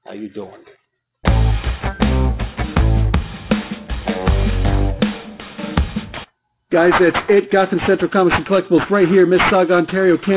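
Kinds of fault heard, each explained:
Aliasing: throughout, everything above about 4 kHz has folded back down into the band as harsh, unrelated tones, which points to a drop from 48 kHz to 8 kHz with no filter first. The folded junk sits only roughly 10 dB under the real sound, so the top end comes across as gritty and metallic.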